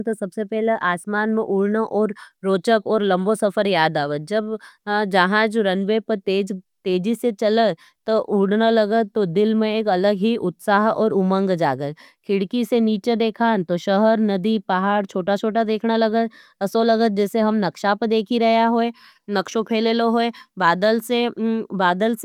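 No technical faults can be heard anywhere in the speech recording; the signal holds steady throughout without any audible disruption.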